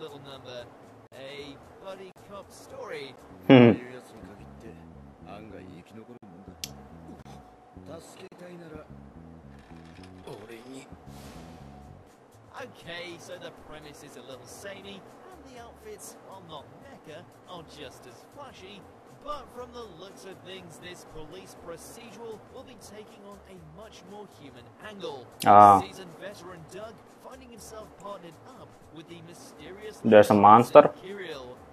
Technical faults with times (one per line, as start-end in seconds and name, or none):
1.07-1.12 gap between stream segments
2.12-2.16 gap between stream segments
3.16 gap between stream segments
4.17 gap between stream segments
5.17 gap between stream segments
6.17-6.23 gap between stream segments
7.22-7.26 gap between stream segments
8.28-8.32 gap between stream segments